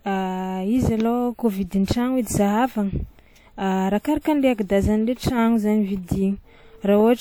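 A speech recording with one fault: pre-echo from 4.21 to 4.25 s, a 40 ms smear of hiss just ahead of a sharp onset. The transform codec spread its quantisation noise across the whole block, so noise sized for the loud attack also fills the quiet gap before it, softening the attack. On a spectrogram it shows as a broadband haze leading into the onset; on the waveform, low-level fuzz precedes the transient instead of silence.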